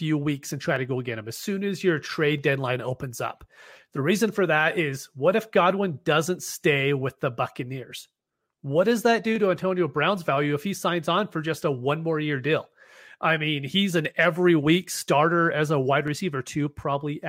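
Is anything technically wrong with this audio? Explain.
Yes. The likely cause is dropped samples: the stream skips a fraction of a millisecond of data, so the waveform jumps straight from one value to a later one. That discontinuity is heard as a single sharp click, with nothing audibly missing, at 0.76, 2.38 (between "as soon as your" and "deadline opens up"), 4.38, 9.36, 14.05 (between "I mean he's an" and "every week starter as") and 16.08 s (just after "starter as a wide").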